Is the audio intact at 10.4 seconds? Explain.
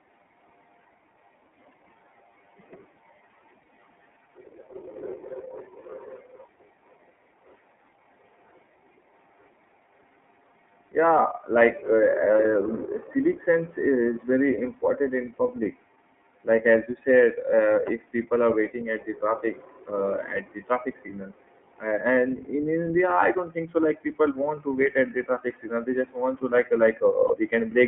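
No. At 10.4 seconds the speech sounds slightly rough and synthetic, with nothing above about 3.5 kHz and little below 150 Hz. This is the iLBC codec, present throughout. It codes each 30 ms frame's excitation independently, which fits its 13.33 kbps mode.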